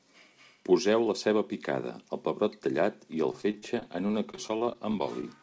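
From 3.32 s to 5.38 s, just after "pebrot tallat i el", the speech turns choppy and robotic from repeated packet loss. Short gaps, the longest about 32 ms, are each patched by extending the previous sound, so roughly a fifth of the stretch is concealed filler. The band stops at 8 kHz throughout, which fits a wideband call codec such as G.722.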